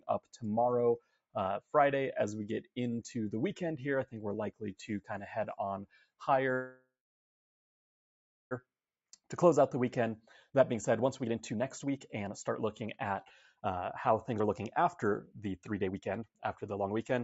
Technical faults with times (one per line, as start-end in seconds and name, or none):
0.00-17.24 noise suppressor applied to music or sounds
0.00-0.39 sound cut by the noise suppressor
0.99-1.36 sound cut by the noise suppressor
5.86-6.22 sound cut by the noise suppressor
6.53-8.53 call audio freeze
8.67-10.10 jitter buffer speed-up
10.50-13.15 jitter buffer speed-up
13.61-17.19 jitter buffer speed-up